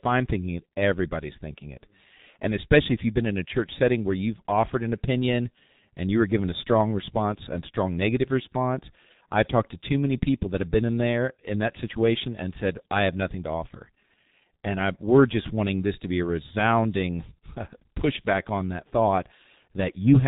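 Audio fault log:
throughout, G.723.1 codec: the speech is heavily damaged by low-rate telephony coding, with nothing above about 3.8 kHz, so it sounds muffled, while a hoarse, buzzy texture and smeared consonants point to a speech model updated only every 30 ms frame, consistent with roughly 6.3 kbit/s. A simple low-pass filter would dull the top end but leave the voice clean; this coarse, rasping resynthesis marks a vocoder-style codec rather than bandwidth loss alone.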